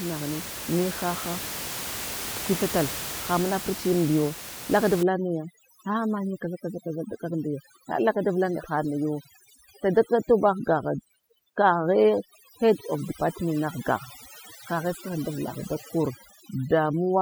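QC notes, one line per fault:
5.03–17.21 s, overdone noise removal: noise reduction set too strong cuts or mutes frequency bands near its noise estimate, taking quiet parts of the speech with them. The room noise, about 10 dB under the speech, drops and breaks up into twinkling specks.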